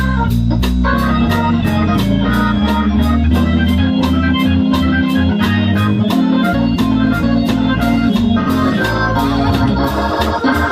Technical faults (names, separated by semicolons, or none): AAC frame loss with concealment